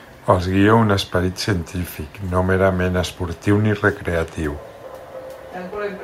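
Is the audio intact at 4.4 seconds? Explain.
Yes, the speech at 4.4 seconds is intact, with no dropout, distortion or other fault at that moment.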